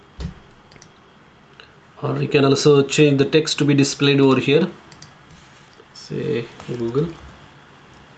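Throughout the clip, the gain swings by around 5 dB, squashing loud and soft parts together. This gain pumping likely comes from gain set far too high, with a fast limiter pulling it down on every peak. Nothing reaches above 8 kHz, which fits the call codec's band limit.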